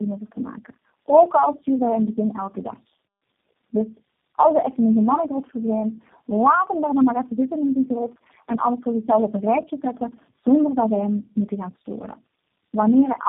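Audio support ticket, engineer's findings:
Tandem speech coding, throughout. Rough, muffled, warbly speech, no content above 3.5 kHz. Points to four low-rate speech codecs in series, consistent with AMR-NB and G.729A legs bridged by G.711, each re-encoding the previous coder's degraded output.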